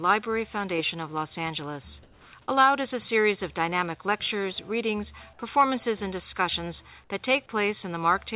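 From 2.03 to 2.33 s, a sender likely stopped transmitting during a lull and the receiver substituted comfort noise in place of the background. The real background, about 28 dB below the loud parts, becomes a steady, featureless hiss about 4 dB quieter, all held under the 4 kHz ceiling of the call path.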